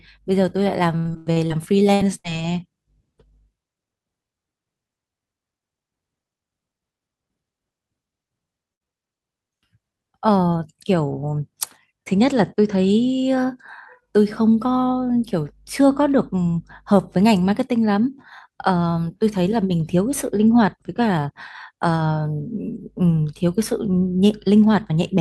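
From 0.97 to 2.34 s the speech suffers repeated packet loss, giving it a robotic sound. Seven packet gaps arrive in quick succession, the longest about 92 ms. Each one is patched by stretching the last stretch of sound, about 0.36 s of fill in all, and roughly 0.3 s of the original is gone. About a quarter of this span is concealment, so the voice turns choppy, with pieces dropped between the patches.

Overlapping that, from 1.72 to 2.71 s, comes a jitter buffer slow-down. To build up a reserve, the receiver padded the stream by repeating single pitch periods and bits of pause, adding about 84 ms. Playback runs at 92 % speed while the pitch stays put. Sounds therefore drag and stretch out across this second, and the drawn-out quality stacks on the robotic chop already present.

At 8.74 to 8.86 s a burst of packet loss takes out a block of around 60 ms. The receiver fills the hole by carrying the last sound forward for about 59 ms and fading it as it goes, plus about 15 ms of added length. 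Whatever was voiced at that moment becomes a brief held buzz, and other sounds a fading hiss. The speech then resumes further on, with that fragment missing.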